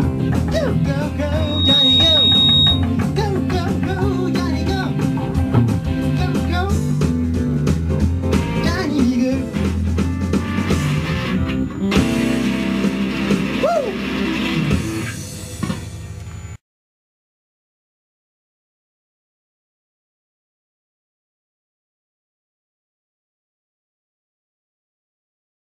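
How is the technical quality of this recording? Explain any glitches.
The recording has one clear fault, a loudspeaker feedback squeal from 1.38 s to 2.87 s. A microphone was picking up a loudspeaker fed by its own signal, and at 3.8 kHz the gain around that loop went past one, so the frequency kept reinforcing itself. The result is a piercing single tone that swells up over roughly a third of a second and then sits a few decibels above the rest of the sound until it stops.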